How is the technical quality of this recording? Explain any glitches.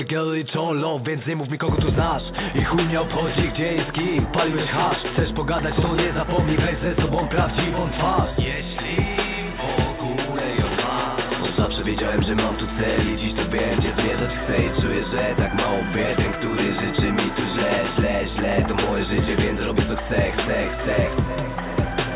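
No glitches to speak of here: the audio has come over a call line, so the top end stops at 4 kHz the way a narrowband telephone-style codec leaves it, and nothing else in it catches the ear.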